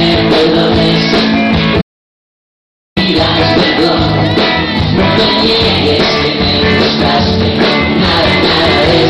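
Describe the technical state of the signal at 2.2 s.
At 2.2 s the input has been lost, likely through a disconnected device, a failed link or a stray mute, while the recorder kept writing silence. This is an audio dropout to silence running from 1.82 s to 2.97 s, about 1.15 s in all. The sound cuts off mid-flow and the gap is dead silence, with no room tone underneath, before the audio resumes abruptly. Whatever occurred during that stretch is simply gone.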